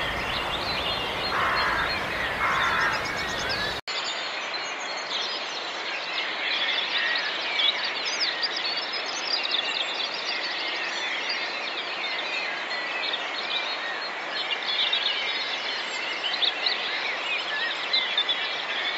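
At 3.80 s the recording likely switches its input to a poorer device, such as a different microphone or a headset's call profile. A brief gap of about 80 ms marks the switch. From there to the end, nothing is passed above 7.6 kHz, so the sound turns duller and boxier. A faint new background noise sits well below the signal, while the overall level stays about the same.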